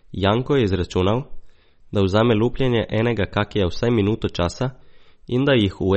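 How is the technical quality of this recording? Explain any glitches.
The recording is noticeably degraded by what is likely MP3 compression, audible across the whole clip. Nothing in the speech reaches above about 8.4 kHz, because the encoder drops the treble at a fixed cut-off when it lacks bits. It also zeroes weak frequency lines that flicker on and off between frames, giving the speech a watery, swirling texture and metallic chirping on s sounds, with consonant attacks smeared. The damage points to a low bitrate, around 32 kbps.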